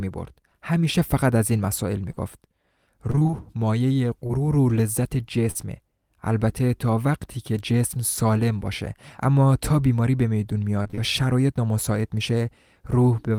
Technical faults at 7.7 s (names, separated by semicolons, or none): none